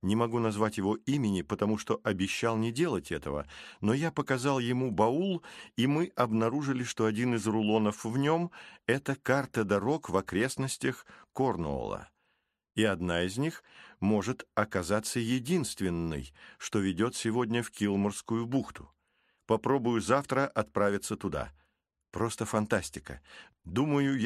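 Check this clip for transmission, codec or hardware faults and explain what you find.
No fault can be heard anywhere in the clip. There is nothing in it to point to or explain.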